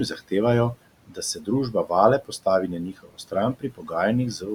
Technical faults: noise suppressor artifacts; speech cut by the noise suppressor

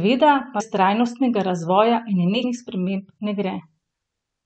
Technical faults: compressed frames skipped

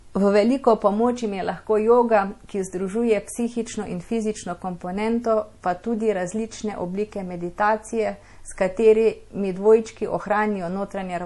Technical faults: MP3 compression

